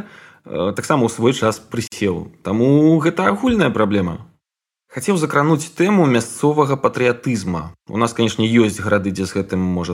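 At 1.87 s the speech drops out abruptly into about 47 ms of silence, ending at 1.92 s, with edges that sound softened rather than razor-sharp, before the speech resumes exactly where it broke off. This is a gap at a join of encoded pieces: two separately encoded segments were spliced without trimming, so the encoder's start-up delay and the padding on the preceding segment's final frame both remain as dead air inside continuous sound.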